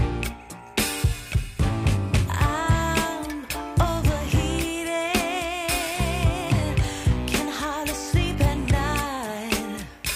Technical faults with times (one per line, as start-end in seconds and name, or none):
5.85-5.98 loose connector crackle